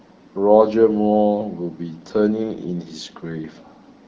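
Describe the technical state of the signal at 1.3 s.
At 1.3 s the speech is intact, with no fault present, and it carries the band-limited character of AMR wideband (HD Voice) coding at 12.65 kbit/s.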